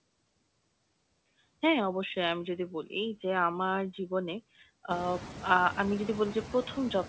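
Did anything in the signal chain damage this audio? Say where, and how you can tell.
Yes, there are noise suppressor artifacts from the call processing stage, running through the whole clip. The room noise gets pulled down by about 21 dB in the gaps and then swells back up underneath whenever speech comes in, so the background pumps with the talker. That's the suppressor estimating the steady noise and ducking those bands frame by frame. From around 5 s, the room noise steps up, and the leftover noise sits noticeably closer under the speech.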